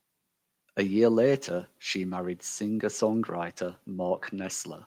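Speech recording, no technical faults audible anywhere in the clip.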